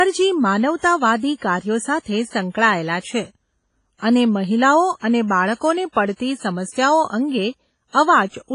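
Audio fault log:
throughout: WMA compression, likely at a low bitrate around 24 kbps. Heavily quantised speech rings with breathing hiss; the spectrogram shows nothing above 10.1 kHz and patchy, gapped harmonics.
5.92–5.97 s: pre-echo. Block-wide quantisation noise smears about 43 ms of hiss ahead of an attack. The waveform shows a noisy stretch before the onset, softening it.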